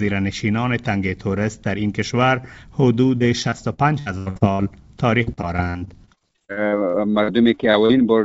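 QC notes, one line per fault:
3.18–4.61 s: repeated packet loss (robotic sound). Nine dropouts in quick succession, the longest about 81 ms, with roughly a quarter of the span patched by extending the preceding audio. That repeated patching gives a choppy sound with pieces missing.
5.23–7.91 s: repeated packet loss (robotic sound). About twenty short holes, none longer than about 48 ms, concealed the same way over roughly a quarter of the stretch. The result is denser chop, heard against content band-limited to 8 kHz, which fits a G.722 call codec.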